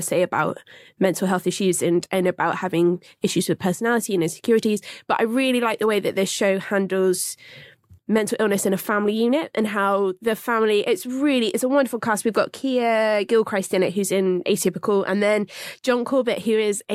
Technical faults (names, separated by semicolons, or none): none